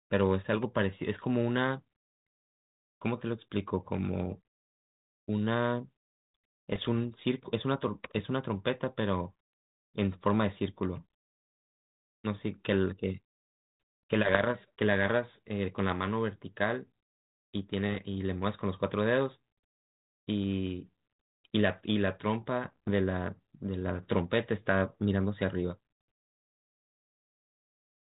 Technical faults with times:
6.73-6.89 bit errors on an ADPCM link
14.28-14.45 bit errors on an ADPCM link
17.95-18.02 bit errors on an ADPCM link
22.64-22.90 bit errors on an ADPCM link

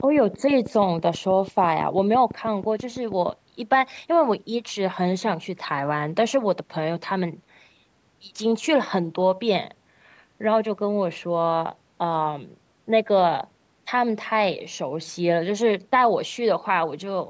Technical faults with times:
0.00-3.30 train of clicks

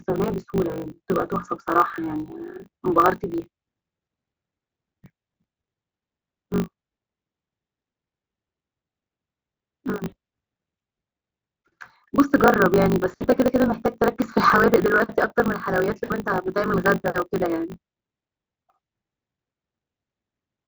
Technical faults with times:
0.00-20.68 block size mismatch (truncated)
10.07-10.14 VoIP packet loss concealed by the speech codec
13.10-13.27 VoIP packet loss concealed by the speech codec
16.03-16.16 VoIP packet loss concealed by the speech codec

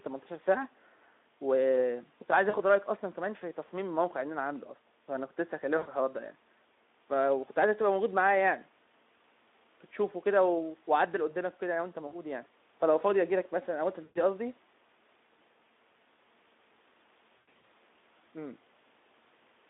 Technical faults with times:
2.49-2.56 VoIP packet loss concealed by the speech codec
5.77-5.87 VoIP packet loss concealed by the speech codec
12.07-12.15 VoIP packet loss concealed by the speech codec
14.03-14.20 VoIP packet loss concealed by the speech codec
17.38-17.70 VoIP packet loss concealed by the speech codec

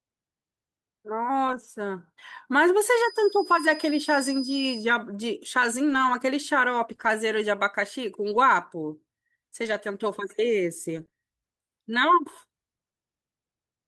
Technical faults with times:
1.47-1.65 lost packet rebuilt from error correction
2.84-4.89 feedback whistle
5.89-11.13 scattered short gaps

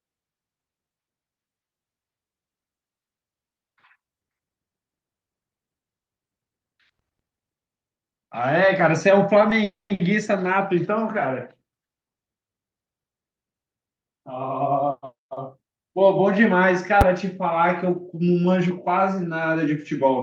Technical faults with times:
9.64-9.92 call audio freeze
9.94-10.02 short stall from a late packet
14.74-15.63 jitter buffer speed-up
17.01 invalid numbers at full scale

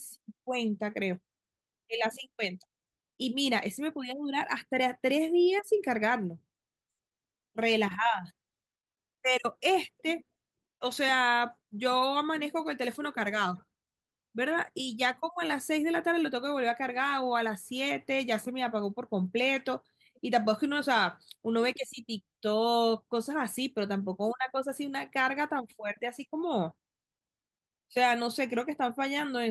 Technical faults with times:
none

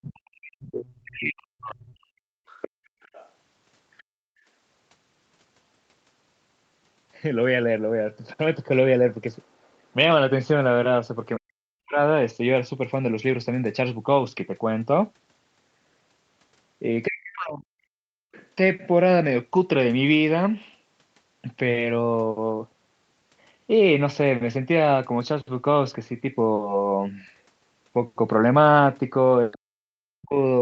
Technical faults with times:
0.00-2.11 speech suppressed in double talk
2.47-4.03 other side's voice leaking through
4.03-4.17 background gated by the echo canceller
11.39-11.99 speech suppressed in double talk
17.07-18.37 speech suppressed in double talk
18.41-18.47 other side's voice leaking through
29.51-30.61 other side's voice leaking through
29.72-30.61 speech suppressed in double talk

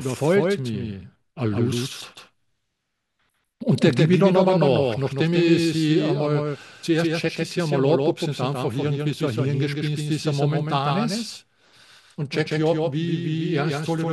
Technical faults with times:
0.00-14.13 doubled audio track

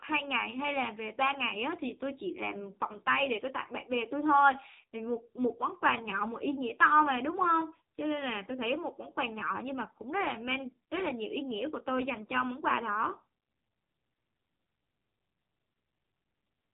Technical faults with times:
0.00-16.73 AMR narrowband mobile codec

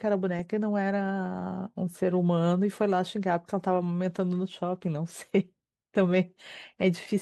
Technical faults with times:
none

